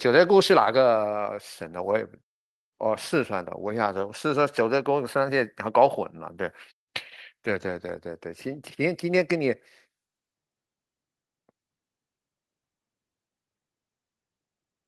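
A speech recording with no technical faults to report.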